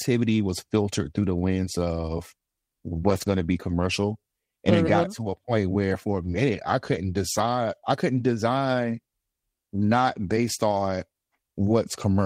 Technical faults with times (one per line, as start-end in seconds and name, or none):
3.09-3.27 lost packet rebuilt from error correction
6.23-6.37 lost packet rebuilt from error correction
7.37-7.43 lost packet rebuilt from error correction
9.79 lost packet rebuilt from error correction
10.71 lost packet rebuilt from error correction